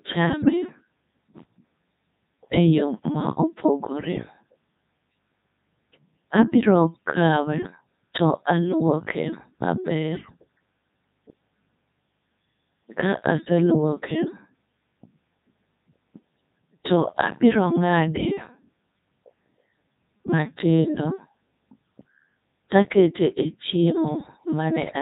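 From the start the speech runs through a Codec 2 vocoder at 3.2 kbit/s, heavily damaged: only pitch, voicing, energy and spectral envelope survive, so a sine-wave resynthesis sounds robotic and buzzy. A spectrogram shows neat, overly regular harmonic combs; the waveform bears little resemblance to natural speech.

From 0.40 to 0.50 s, bit errors on digital voice radio corrupt the vocoder parameters, with a few percent of bits flipped across a stretch that fits about five 20 ms frames. Pitch, level and timbre jump into a warbling bleep, seen as abrupt harmonic shifts and stepped amplitude.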